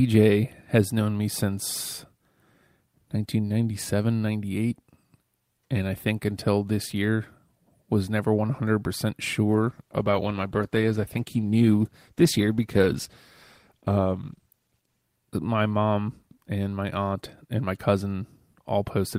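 At 9.46 s, just before "my mom and my", a call bitrate drop begins. The encoder falls from 40 to 14 kbps, coding coarsely and cutting highs. Sound turns rough, watery or muffled until 15.09 s.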